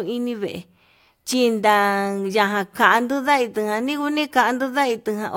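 At 1.33 to 1.35 s a single loud pop cuts across the speech, a sharp click standing a few decibels above it while the talking continues underneath. It is likely a stray voltage pulse. The waveform shows a narrow spike, the spectrogram a thin vertical broadband stripe.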